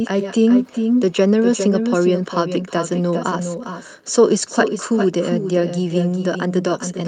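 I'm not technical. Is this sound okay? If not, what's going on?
No. Throughout this speech, every phrase comes back again about 0.4 seconds later. The copy is quieter and thinner. This is echo with no canceller. The far end's loudspeaker is heard by its own microphone, and nothing removes that sound.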